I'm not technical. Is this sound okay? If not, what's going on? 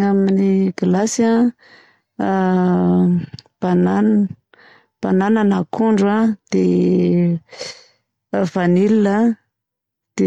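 Yes, it sounds fine.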